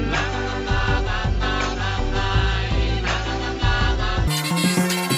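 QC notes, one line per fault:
4.28–5.17 s, wrong sample rate: the final stretch plays back 2.76 times too fast with no rate conversion, so timing compresses and pitch rises together, by about 17.6 semitones (nearly an octave and a half). The sound turns shrill and hurried, with everything racing through at almost three times normal speed. That ratio fits 16 kHz material being clocked out at 44.1 kHz, with each sample simply played sooner than it was captured.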